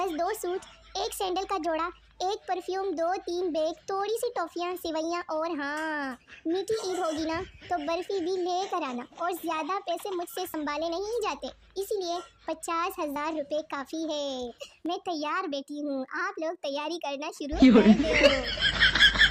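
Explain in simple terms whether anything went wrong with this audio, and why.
Something did go wrong: the recording program likely fell behind and failed to collect its samples before the hardware overwrote them, which is called a dropped buffer (overrun). Each time, a small piece of audio vanished and the parts on either side were joined directly, with no gap of silence. You hear a sudden jump in the sound at 10.54, 11.4, 13.16 and 14.86 seconds. The first skip loses about 40 milliseconds and the others about 20 milliseconds each.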